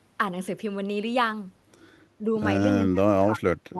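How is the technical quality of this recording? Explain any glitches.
The recording has clear dropouts near the end. It runs through an Opus call path that tops out around 12 kHz.

Speech suppressed in double talk, from 2.19 to 2.29 s and from 2.77 s to the end: the echo canceller likely mistook this side's talk, overlapping the far end, for echo. It clamped the voice, dipping it slightly at first, then by about 30 dB.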